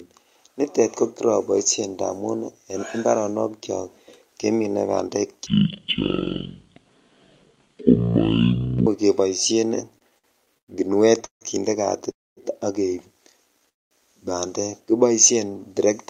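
From 5.47 to 8.87 s, a section at the wrong speed most likely comes from the passage being played against the wrong clock, at about 0.51 times its recorded rate. Speed and pitch fall together, so the speech drops by roughly ten semitones and turns deep, slow and drawn out. It then snaps back to normal speed and pitch at 8.87 s.

Between 9.99 and 10.70 s, repeated stalls (stutter) occur because packets keep arriving late, and the jitter buffer runs dry five times. Each time, the receiver stretches the last sound to cover the wait, filling about 0.2 s in total. The longest wait is 102 ms, and more than a quarter of the span is concealed. Nothing is lost, but the speech drags and stutters as it catches and restarts.

Three call audio freezes follow at 11.25 to 11.43 s, 12.11 to 12.39 s and 13.69 to 13.93 s. They are likely caused by packets being held up in transit until the buffer empties, adding 160, 259 and 220 ms of delay respectively. 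In each one, the last sound hangs briefly and fades to silence for most of the gap, lasting about 130, 230 and 210 ms. The speech then resumes exactly where it stopped.

At 16.07 s, right at the close, a jitter buffer speed-up begins. The receiver trims tiny pitch-period slices to work off excess buffered audio, which runs the sound at about 107% speed without any change in pitch. Because it covers only the final moment of the clip, it shows up as a hurried quality before the end.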